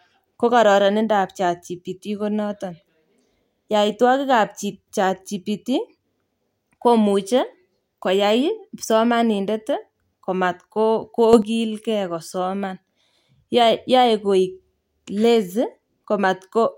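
At 11.33 s the speech suddenly gets louder by about 8 dB, and the background noise rises with it. The level stays raised until 11.42 s. Because voice and noise move up together in a single step rather than a smooth swell, this is a sudden gain jump. The likely cause is a digital gain change applied between one sample and the next with no ramp, such as a level setting or bit shift taking effect instantly.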